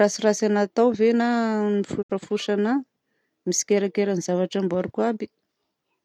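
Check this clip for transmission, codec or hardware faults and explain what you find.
One fault appears in the speech. At 2.01 to 2.12 s there is a digital broadcast dropout. The receiver lost valid frames and muted. The sound fades out over 20 ms and leaves a 64 ms gap, which fits a couple of dropped frames.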